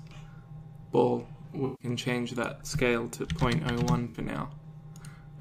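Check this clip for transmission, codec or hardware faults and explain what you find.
Two dropouts point to AAC frame loss with concealment: at 1.65 to 1.87 s and 4.08 to 4.18 s, the decoder rebuilt the missing frames from the last good spectrum. On a spectrogram these spans look blurred and smeared.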